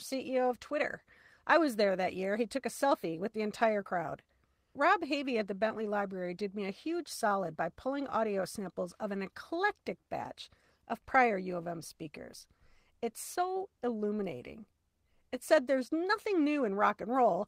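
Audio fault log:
throughout: clock drift between sender and receiver. The tempo feels faintly unsteady across the speech, with small hiccups at uneven intervals, because the sender's clock runs roughly one and a half percent slower than the receiver's, leaving the receiver short of audio.
0.36 to 10.80 s: repeated timing corrections. Delivery drags slightly, running at 99% speed, as the receiver repeats short pieces to cover the slow sender, stretching this stretch by something like 150 ms.
12.78 to 17.32 s: repeated timing corrections. The same slight drag returns at 99% speed, as the receiver again repeats brief pieces to keep pace with the slower sender, adding roughly 50 ms overall.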